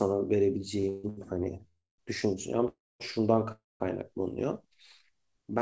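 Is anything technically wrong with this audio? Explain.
Yes. The speech is repeatedly held and interrupted by timing faults on a call path whose sound stops at 8 kHz, consistent with G.722 at 64 kbps.

Short stalls from a late packet at 0.80 to 0.85 s and 1.09 to 1.19 s: a packet arrived late, the jitter buffer emptied, and the receiver stretched the last sound for about 31 ms and 76 ms, then resumed. The result is a briefly prolonged sound with a slight buzz or dip.

Call audio freezes at 0.89 to 1.05 s, 1.68 to 2.00 s, 2.68 to 3.02 s and 3.52 to 3.82 s: packets were likely delayed in transit, draining the buffer. The held sound fades as a buzz or hiss, with fills totalling 144, 302, 317 and 282 ms. In the last three freezes it ends in roughly 170 to 230 ms of silence before the speech picks up where it stopped.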